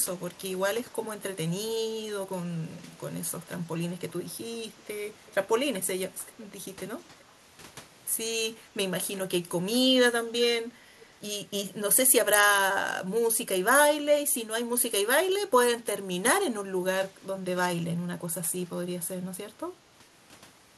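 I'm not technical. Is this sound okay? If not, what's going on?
No. There are two kinds of problem.

The first is an echo leak. Faint, brief copies of the voice come back about 0.38 to 0.39 seconds late, at 4.79, 5.27, 6.27, 7.2 and 11.0 seconds. This is likely because one side is on a loudspeaker and its echo canceller let some of that sound back through. Unlike a room's natural echo, which trails off smoothly, these are separate delayed scraps.

The second is background gated by the echo canceller. From 15.98 to 16.24 seconds the room sound suddenly dips sharply for about a fifth of a second, then returns. The canceller turned the microphone right down while the loudspeaker was playing. Unlike a connection dropout, which cuts the audio out abruptly, here the background ducks down and comes back up.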